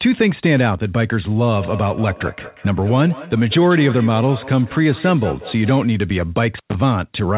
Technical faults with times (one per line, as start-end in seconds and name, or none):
1.46-5.96 feedback echo between two devices
6.54-6.74 intermittent contact